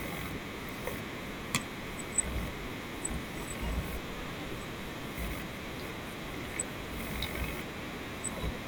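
From about 1.81 s to 8.31 s, a click recurs every 2.17 s, four times, likely clock drift buffer slips: mismatched clocks (roughly 150 ppm apart) dropping or repeating a handful of samples.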